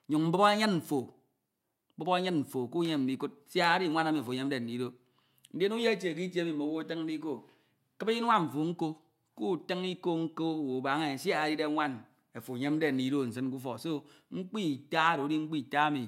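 No faults are audible anywhere in the speech recording.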